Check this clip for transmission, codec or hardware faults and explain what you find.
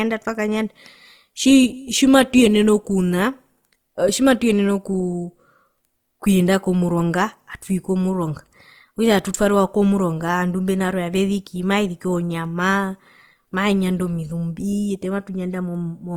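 There's one problem, and it runs through the whole recording: Opus compression damage that you can plainly hear. The speech has a rough, grainy texture, with a noisy fizz over the voiced parts instead of clean tone. The top end is still there, so it isn't muffled. That fits Opus in its music (CELT) mode, likely running at a tight rate around 24 kbps. When the bits run short, the encoder keeps each band's energy but refills the detail with folded or noise-like content, which is where the graininess comes from.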